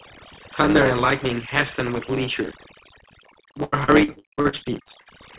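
From the start and across the whole speech clip, overdone noise removal is at work. The suppressor pushed individual frequency bands down or out whenever they came close to its noise estimate, so the background collapses into near silence dotted with twinkling specks, and the quieter parts of the voice are eaten away. On a spectrogram this shows as scattered isolated dots of energy in the gaps between speech and ragged, holey harmonics within it.

Also present throughout is a block size mismatch (truncated). One stage hands over longer blocks than the next one reads, and the tail of each block is discarded. That repeated cut produces a steady buzz at 109 Hz, and the speech runs 1.09 times fast while keeping roughly its normal pitch. A zoomed waveform shows small discontinuities recurring every 9.2 ms or so, and the spectrogram carries vertical striping at that rate.

From 3.64 s to 5.09 s comes repeated packet loss (robotic sound). 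A dozen gaps arrive in quick succession, the longest 82 ms. Each is patched by extending the last bit of sound, about a third of the span is filled this way, and the next gap follows soon after. The result is choppy speech with pieces missing. The spectrogram shows smeared, frozen stretches of flat harmonics, broken by abrupt joins where real audio resumes. All of this sits within a narrowband call path with nothing above 4 kHz, which fits a G.711-style telephone codec.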